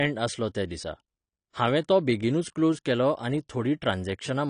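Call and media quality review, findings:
Dull, smeared speech for the whole clip, nothing audible above 10 kHz, sibilants fizzy and warbling, plainly audible codec damage. Likely AAC compression (AAC-LC) at a low bitrate, consistent with around 37 kbps: too few bits per frame, so the encoder drops the top band and coarsely quantises the remaining spectral lines, leaving holes or filled-in noise that smear consonants.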